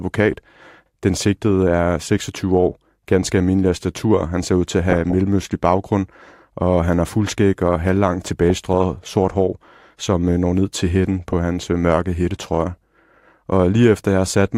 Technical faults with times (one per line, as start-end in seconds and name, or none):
4.90-5.15 DAB burbling
8.25-9.08 DAB burbling
11.12-11.33 DAB burbling
12.76-12.99 DAB burbling